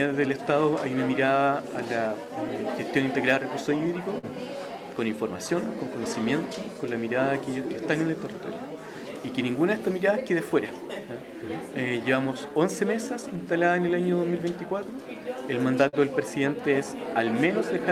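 The audio shows clock drift between sender and receiver, running all through the clip. The sender's clock runs slow, by roughly 4 percent against the receiver. Audio arrives a little too slowly, so the jitter buffer keeps draining. The pace sounds slightly dragged and uneven rather than broken. From 0.20 s to 17.80 s there are repeated timing corrections. The receiver keeps repeating short pieces so it does not run dry. Playback ends up at about 96 percent speed, and roughly 0.7 s is added overall. Each repeat is small. They all push the same way, but they are unevenly spaced. If heard at all, they come across as faint hiccups and a wavering tempo. Twice the buffer did run empty, giving a short stall from a late packet. The first is at 4.18 to 4.25 s. The receiver held the last sound for 49 ms until the packet arrived. The second is at 15.88 to 15.95 s, held for 47 ms. Nothing is lost in either case. 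Playback resumes from the same point. Each stall sounds like a brief held sound with a slight buzz or dip. The delay grows by the held amount each time, and the slow sender likely causes both stalls.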